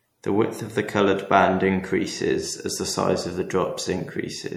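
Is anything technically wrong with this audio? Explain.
Yes. MP3 compression throughout: weak frequency lines flicker between frames and nothing passes 19.5 kHz, leaving the speech watery and swirly, likely from a rate near 64 kbps.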